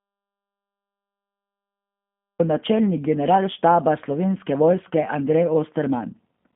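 From start to finish the speech sounds narrow, slightly rough and synthetic, with nothing above 3.6 kHz and a telephone band of about 150 Hz to 3.5 kHz. That is the G.729 codec, which fits an 8 kbit/s stream: it rebuilds each 10 ms frame from a vocal tract filter, a pitch predictor and a few pulses.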